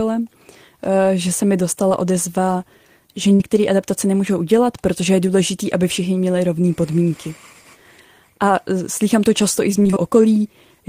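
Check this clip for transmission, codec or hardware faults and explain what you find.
Three transmission faults from packet loss are audible in this speech clip, each at a different scale.

At 1.89 s, between "že se mi" and "odezva že", there is a short concealed packet loss. About 20 ms of the stream failed to arrive in time, and the decoder patched the gap by extending the preceding sound before blending back in. It is heard as a single brief smear. Unlike a burst, the hole is only a few hundredths of a second.

From 3.34 to 3.41 s, after "odezva že" and before "adaptace nemůžou udělat protože", a burst of packet loss removes about 60 ms. The receiver stretched the last sound and faded it across the hole, giving a short held, decaying tail. The speech then resumes slightly further on. This is longer than the first fault, and the gap is genuine missing material, not a mere blip.

From 9.79 to 9.98 s, following "to často i z", there is repeated packet loss with a robotic sound. 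Losses recur across the stretch, the longest about 20 ms and about 100 ms in total. Concealment patches nearly half of the span, one patch after another. The result is choppy speech. It differs from a burst because it is many small interruptions in quick succession, not one continuous hole.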